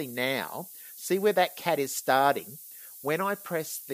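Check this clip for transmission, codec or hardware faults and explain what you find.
One fault runs through the whole clip. Low bit depth with noise shaping is present from start to finish: the hiss points to the audio being stored with only about 7 bits per sample. Rounding each sample to so few levels leaves a large error, and noise shaping feeds that error back so it is pushed up toward the top of the band. The result is a steady, thin hiss that grows much brighter at high frequencies, sitting only about 15 dB below the sound itself.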